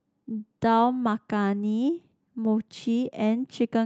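Speech over an Opus call path shows a call bitrate drop from 0.63 to 2.07 s: coding turns coarse and rougher for about 1.1 s, consistent with the encoder falling from around 32 to 18 kbps.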